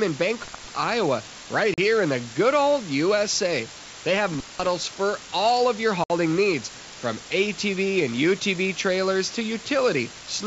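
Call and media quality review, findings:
Low bit depth with dither, entire clip: constant even hiss, no distortion. Requantised to 5 bits with dither, so noise sits only around 15 dB below the signal. Spectrogram shows a flat broadband noise floor filling every pause. Waveform shows a thick fuzz band around zero.

Intermittent contact, 0.43–0.64 s and 4.33–4.67 s (second just before "for all of your"): audio drops out for about 190 ms each, with crackle at both edges. Probable loose cable or plug opening the line. Spectrogram shows vertical broadband streaks at the edges with near-empty bands between.

Packet loss on an ADPCM call, 1.74–1.79 s (40 ms, just before "in the good old") and 6.04–6.11 s (60 ms, between "for all of your" and "needs from"): hard-edged silent holes, which fits about two and three 20 ms packets lost. The decoder's adaptive predictor and step size drift out of step with the sender, so audio returns slightly distorted for some tens of milliseconds. 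Waveform shows a flat silent gap with square edges. The G.722 path at 64 kbit/s carries the wideband band cleanly.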